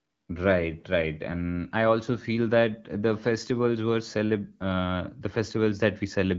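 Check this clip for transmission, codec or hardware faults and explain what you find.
No faults found in this speech.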